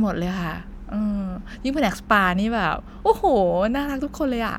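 Nothing in this recording points to a technical fault.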